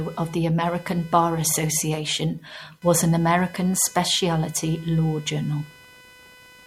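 A thin, buzzy chirping rides under the speech from start to finish, pulsing at something like five hundred times a second and sitting roughly 25 dB below the voice. It does not follow the talker's rhythm or level, which marks it as computer activity noise: shifting load on the processor, graphics card or mouse disturbs the ground the audio circuit shares with the computer, and those fluctuations leak into the recording as interference.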